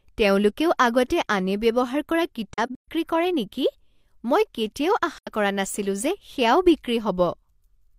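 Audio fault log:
2.54–2.88 s and 5.18–5.28 s, AAC frame loss with muting: speech drops into soft-edged silent holes, about 213 ms lost across a 340 ms stretch with the longest gap around 150 ms, then about 85 ms. The decoder zeroes missing frames, so overlapping windows fade sound out and back.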